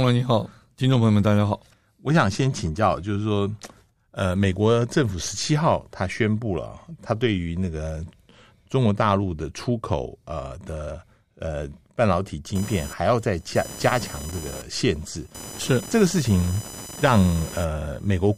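From 12.55 s to the end, computer activity noise: computer load shifts the shared ground, adding a chirping buzz near 1 kHz, roughly 15 dB under the speech, visible as an intermittent spectral line.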